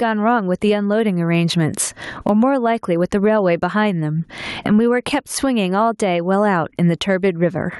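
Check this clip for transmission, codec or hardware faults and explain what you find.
Gain pumping runs through the whole speech clip. The gain swings by around 25 dB, pulled down on every loud sound, squashing loud and soft parts closer in level, likely from input gain set far too high with a fast limiter clamping it back down.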